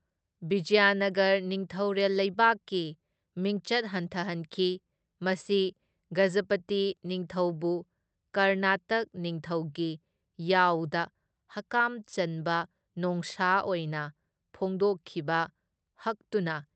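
Clock drift between sender and receiver runs throughout: the sender's clock is about 2% slow, so the receiver's jitter buffer keeps draining and must stretch the audio to stay in step. From 0.54 s to 16.63 s, repeated timing corrections insert short repeated fragments, all in the same direction and unevenly spaced, adding roughly 0.3 s and playing the speech at 98% speed. They come across as faint hiccups and a slightly dragging, unsteady tempo over the Opus call path, whose band limit sits near 8 kHz.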